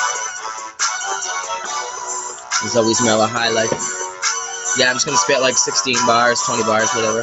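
From the start, a noise suppressor applied to music or sounds is working on this audio. A speech-tuned suppressor treats steady tones, ambience and reverb as noise, so the level keeps dipping and recovering by about 5 dB, giving a pumping, fluttering, thinned character. Unlike a compressor, it doesn't follow overall loudness. It leans on whatever is sustained, while sharp onsets pass through largely intact.

Three spots show the sound cut by the noise suppressor more heavily. From 0.31 to 0.81 s, the sound sinks by up to about 8 dB. From 1.86 to 2.08 s it drops by about 5 dB, and from 2.25 to 2.52 s by about 7 dB. Here the sustained parts and decaying tails are pulled down and cut short rather than lost outright. That separates these dips from a dropout or packet loss, which would leave a gap or a glitch instead of a softened, shortened fade. The top end stopping near 8 kHz is the call path's bandwidth, not part of this.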